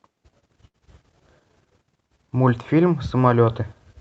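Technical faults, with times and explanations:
0.67–0.76 s, short stall from a late packet: one speech sound hangs for 68 ms with a slight buzz or dip, then carries on with nothing lost. A packet arrived late, the jitter buffer ran dry, and the receiver stretched the last sound until it came.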